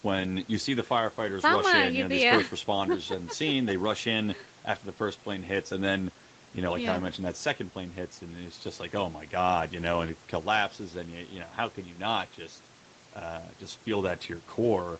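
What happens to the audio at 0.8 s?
Nothing goes wrong at 0.8 s: the speech passes through intact there, carrying only the normal band limit of the call path, with nothing above 8 kHz.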